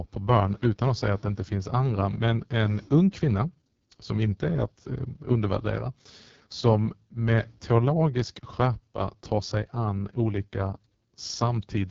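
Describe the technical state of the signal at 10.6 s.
At 10.6 s the speech sounds rough and raspy, with no air above about 7 kHz. This is AMR wideband (HD Voice) codec damage, present throughout the clip rather than just at this moment. The codec rebuilds the voice from a pulse-excited model of the vocal tract and fills the top band with shaped noise. The heavy roughness points to its lowest rate, around 6.6 kbit/s.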